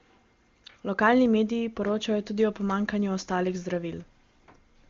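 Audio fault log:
No fault to log for this clip.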